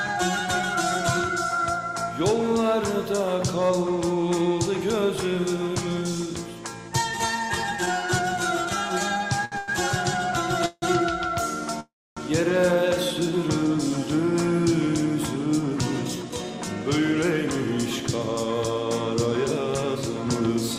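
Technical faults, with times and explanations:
7.85 to 10.84 s, repeated stalls (stutter): the sound halts six times, each hold-up filled by continuing the last sound, the longest about 163 ms and 363 ms in total, as packets kept arriving late and the jitter buffer drained repeatedly. Nothing is lost, yet the audio drags and stutters. A spectrogram shows brief smeared, repeated stretches breaking the flow.
11.80 to 12.18 s, call audio freeze: the audio stops for about 364 ms, with the last sound carried on briefly and then roughly 280 ms of near silence, before resuming where it left off. The likely cause is packets held up in transit emptying the jitter buffer. The waveform shows a flat gap after a short fading tail.
15.46 to 16.58 s and 17.90 to 20.77 s, jitter buffer speed-up: the sound runs about 7% and then about 4% fast at unchanged pitch, so the first stretch feels hurried. The receiver was trimming an overfull jitter buffer by cutting many tiny pitch-period pieces, roughly 70 ms and 100 ms in all. 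A spectrogram shows slightly compressed timing with no shift in frequency.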